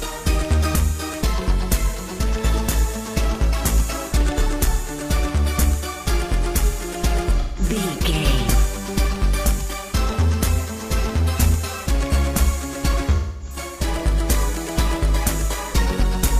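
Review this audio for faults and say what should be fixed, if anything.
AAC frame loss with concealment occurs at 7.40–7.63 s and 13.15–13.56 s, where the decoder patched missing frames from the last good spectrum. Unlike a hard dropout, these gaps are smeared and phasey rather than silent, with spans fitting roughly four and six lost frames. Adding transport-layer error protection or retransmission would prevent it.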